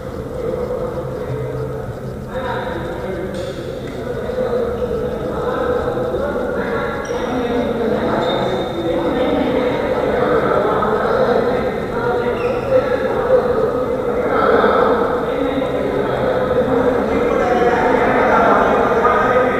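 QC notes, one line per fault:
No faults were heard in this clip. Nothing in the audio calls for a time or a note.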